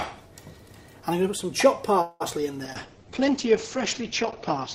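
Repeated packet loss (robotic sound) runs from 2.01 to 2.45 s. Successive holes, the longest 188 ms, are patched by stretching the previous sound, leaving a choppy texture with pieces missing. A call bitrate drop follows from 2.65 s to the end. The bandwidth narrows from 20 kHz to 8 kHz, and the coarser, rougher coding points to a fall from around 96 to 8 kbps. Overlapping it, a jitter buffer slow-down from 2.73 to 3.11 s repeats short pitch periods to rebuild its reserve, adding 60 ms. The sound plays at 86% speed with unchanged pitch.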